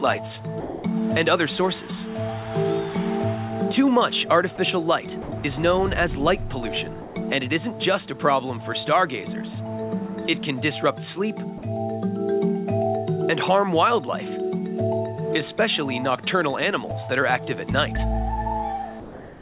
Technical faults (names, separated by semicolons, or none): sound dropped by the voice detector